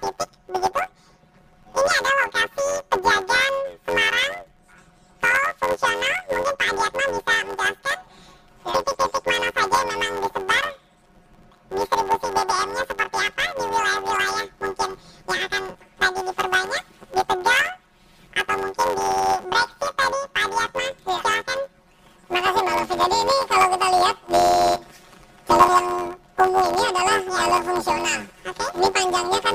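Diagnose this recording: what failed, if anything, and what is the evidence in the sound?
The sample-format conversion failed: planar audio was read as interleaved. Each 10.88 ms block of left-then-right samples plays as two double-speed halves, so throughout the clip the sound carries a robotic buzz at the 91.9 Hz block rate, without an obvious octave jump.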